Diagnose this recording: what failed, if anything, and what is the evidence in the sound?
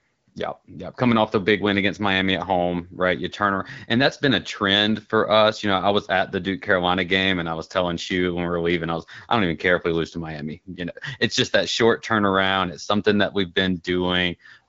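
Nothing stood out on listening to this speech recording, and no stage in the chain shows anything that calls for a diagnosis.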